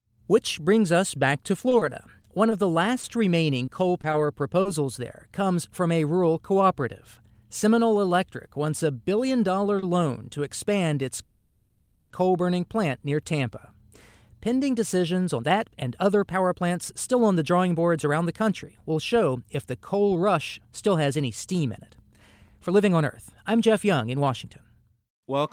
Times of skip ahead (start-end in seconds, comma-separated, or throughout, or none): none